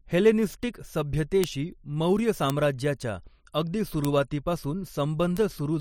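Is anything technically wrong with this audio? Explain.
Yes. The speech carries four isolated sharp ticks, at 1.44, 2.50, 4.05 and 5.37 seconds, each a single bright click spread across the whole spectrum and unrelated to the speech around it. These are bit error spikes: a single flipped bit in memory or on a digital link throws a sample's value off by a power of two, then the next sample returns to normal. Each tick is too brief to be anything but one sample, or two at 1.44 s, jumping out of place.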